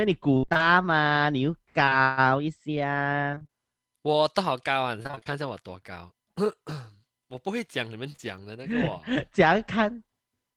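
Speech carried over a lossy network link, with two related faults. Repeated packet loss (robotic sound) hits from 0.37 to 0.61 s, 3.31 to 3.51 s and 5.03 to 5.38 s. Each stretch holds five or six gaps in quick succession, and the decoder patched roughly half of each span by extending the last sound: about 58, 48 and 52 percent. The longest hole, 57 ms, is in the first stretch. Because the fills come back-to-back, the audio turns choppy and machine-like rather than briefly blurred. Short concealed packet loss is different. It appears as isolated events, two adjacent 20 ms dropouts at 1.85 to 1.93 s and another pair at 8.12 to 8.20 s. Each was filled once from the preceding sound and then blended back, so it comes across as a single quick smear or wobble, with no sustained robotic texture around it.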